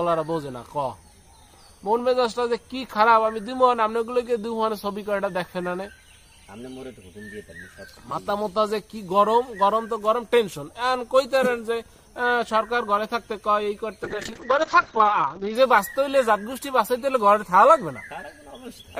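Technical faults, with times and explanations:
14.05–15.61 s, call bitrate drop: for about 1.5 s the sound turns coarse and muffled, then regains its detail. The audio bandwidth narrows from 20 kHz to 8 kHz, removing the upper treble, while the remaining band is coded with far fewer bits, giving a rough, watery texture. This fits the bandwidth estimate collapsing and the encoder being pushed from around 64 kbps down to roughly 7 kbps before recovering.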